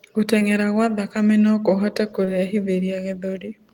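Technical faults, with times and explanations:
0.39–0.43 s and 2.25–2.29 s: short concealed packet loss. In each, about 20 ms of speech arrived too late to decode, and the receiver bridged it by extending the preceding sound for about 14 ms and then 22 ms before crossfading back. The result is a brief smear or wobble rather than the clean silent hole of an uncovered dropout.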